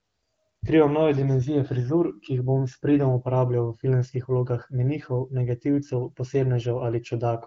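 No technical faults can be heard in this speech recording.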